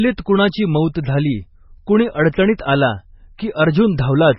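The whole clip carries heavy damage from likely MP3 compression. Nothing remains above 5.5 kHz, so the speech sounds dull. Weak frequency lines drop in and out between frames, leaving a watery, swirling texture. The damage fits a very low bitrate, around 16 kbps.

At 2.57 s, just after "कुणाची मौत झाली कुणी", there is pre-echo. A sharp attack sits late in a coding block. Its loud-level quantisation noise spreads back about 15 ms, so a brief hiss comes first and the onset smears.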